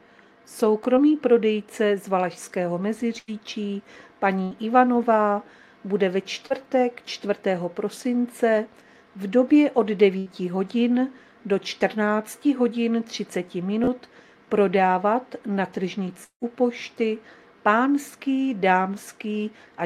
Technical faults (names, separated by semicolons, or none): repeated buffer; short concealed packet loss; burst of packet loss; long network dropout